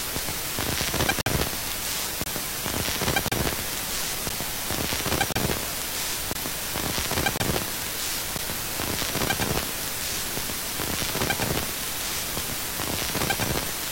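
A recording of everyday sounds, interrupted by gaps between stream segments. Short holes of silence with hard edges cut in at 1.21–1.26, 2.24–2.26, 3.28–3.32, 4.29, 5.32–5.36, 6.33–6.35, 7.37–7.40 and 8.38 s. They last from about 10 to 51 ms. They recur roughly once a second, which fits one-second segments. The time stamps of neighbouring segments leave a small gap, and the player fills it with silence. No audio is lost.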